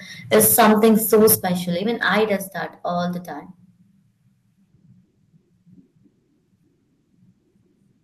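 From 0.33 to 1.35 s the speech shows microphone overload. Peaks run about 12 dB past the converter's limit, likely from an input set too high. Roughly a fifth of the samples are flattened, giving a harsh crackle. The microphone volume steps down three times: about 2 dB at 0.35 s, about 9 dB at 1.35 s, and about 5 dB at 2.37 s, just before "that all the time". Each is a sudden drop in level, likely the call software lowering the input after clipping.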